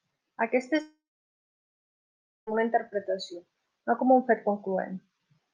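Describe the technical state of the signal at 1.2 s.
At 1.2 s the speech has gone silent. Around 0.81 s the last sound smears into a brief buzzy tail that fades within roughly two tenths of a second, and from there to 2.49 s there is only silence. This is likely a long network dropout: the receiver got no audio for about 1.66 s and stretched the final fragment to cover the gap before giving up. When the speech resumes at 2.49 s, the lost stretch is simply missing.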